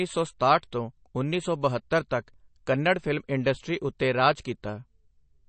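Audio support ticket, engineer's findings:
Swirly, watery speech throughout, plainly audible codec damage. Nothing above 8.3 kHz. Likely MP3 compression at a low rate, fitting about 32 kbps. Encoder short of bits, so it cuts treble at a fixed point and drops weak frequency lines frame to frame.

Pre-echo at 0.39 s. Brief hiss just before a speech attack, spread over 12 ms, so the onset sounds softened. Same transform codec. Quantisation noise sized for the loud attack fills the quiet start of its block.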